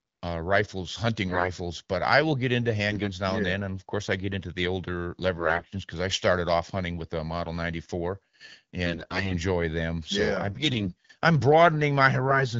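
AMR bit errors hit at 1.28–1.51, 2.88–3.08, 5.37–5.68, 8.86–9.35, 10.48–11.08 and 12.27–12.42 s. Corrupted frame bits misplace excitation pulses, making speech hoarse and gargly, worst near 9 s.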